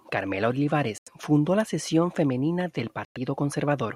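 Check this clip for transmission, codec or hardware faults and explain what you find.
The speech has two short silent gaps. At 0.98 to 1.08 s, just before "fundó la sección femenina", about 85 ms of sound vanishes. At 3.05 to 3.17 s, right after "la sección femenina del", about 107 ms disappears. In both holes the speech resumes further along, as if it had kept playing through the gap. This is likely a Bluetooth dropout: packets reached the headphones too late and were discarded, leaving silence until fresh packets arrived.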